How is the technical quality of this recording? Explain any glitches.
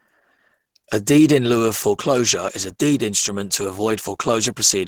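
The speech carries plainly audible Opus compression damage from start to finish. The voice sounds hoarse and grainy, with rough, noisy texture where cleaner tone should be, while the top end still reaches about 20.4 kHz. That combination points to a low bitrate, roughly 16 kbps, with the encoder likely working in its hybrid speech mode. There it codes the lower band with SILK and the upper bands with CELT, leaving speech hoarse rather than swirly.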